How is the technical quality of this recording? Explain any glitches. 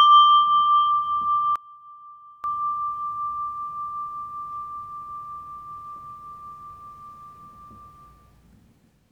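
One glitch stands out. From 1.56 to 2.44 s the sound drops by about 21 dB, most likely because one channel is inverted. Summed to mono, the shared content cancels, leaving only a faint residue of the difference between channels. That residue, rather than true silence, is what separates this from a dropout.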